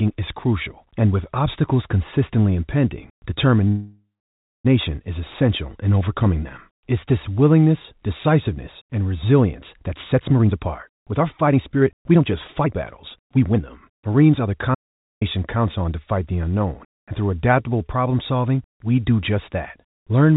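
At 3.68 s the sound stalls in a call audio freeze lasting until 4.67 s. The final fragment before the stall is stretched into a decaying buzz, and about 0.59 s of that hold is plain silence. The likely cause is delayed packets leaving the jitter buffer empty. When the audio resumes it carries on from where it stopped, so roughly a second of gap has been inserted and nothing is lost. That separates it from a dropout.

Three jitter buffer speed-ups follow, from 9.84 to 12.21 s at about 123% speed, from 12.61 to 12.73 s at about 154%, and from 13.18 to 15.64 s at about 113%. The buffer was holding more audio than it aims for, so the receiver trimmed it by cutting out tiny pitch-period slices, about half a second in the first stretch and around a third of a second in the last. The speech sounds hurried but its pitch stays put, which rules out a plain playback-rate change.

Inside that last stretch, from 14.75 to 15.21 s, there is an audio dropout to silence lasting about 0.47 s. 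The sound cuts off mid-flow into silence with no room tone, and that piece is gone for good. The likely cause is an input or link briefly failing while silence was still being written. Unlike the freeze, there is no decaying tail and the audio does not resume where it left off.

Throughout, the band stops at 4 kHz, which fits a narrowband G.711 telephone codec.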